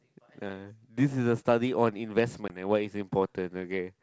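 At 2.48 to 2.52 s, packet loss on the ADPCM call leaves a hard-edged 20 ms gap, about one packet. The decoder's predictor loses step, so speech resumes slightly distorted.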